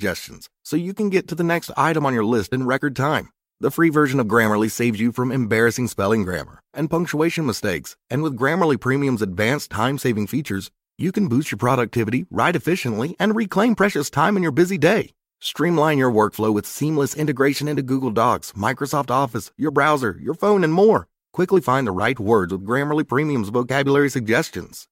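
No technical faults are audible.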